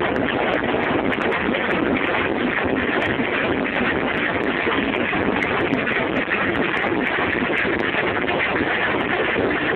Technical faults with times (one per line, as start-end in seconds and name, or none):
none